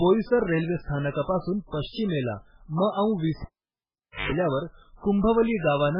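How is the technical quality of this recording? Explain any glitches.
The recording has two problems: heavy codec damage across the whole clip, and a cable dropout in the second half.

The MP3 compression damage runs throughout. Nothing survives above about 5.2 kHz, so the speech sounds dull and band-limited. With so few bits, the encoder drops weaker frequency lines and they flicker in and out from frame to frame, giving a watery, swirly texture with smeared attacks and chirpy sibilants. The damage fits a very low bitrate, likely around 8 kbps.

From 3.42 s to 4.32 s the cable is pulled and plugged in. A pop marks the disconnect, then the signal drops to near silence for about 0.86 s. During that gap, 50 Hz mains buzz lasts about 110 ms, which is the sound of a live plug whose tip touches the socket before it seats fully. A second pop marks the audio's return as the connection is restored.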